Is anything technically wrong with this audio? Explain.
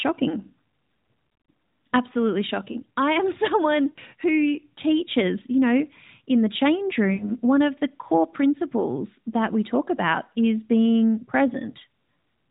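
Yes. At 3.90 to 3.99 s, just before "who teaches you know", and at 7.14 to 7.32 s, between "know in the change" and "one of the core", the speech smears into a drawn-out, fading tone, then returns weak or rough. These are lost AMR speech frames: a gap of about 60 ms each time, consistent with three 20 ms frames failing their checksum, so the decoder repeated the last good pitch and vocal-tract settings at falling gain. The AMR narrowband mobile codec itself is working normally, with light damage that suggests its 12.2 kbps mode.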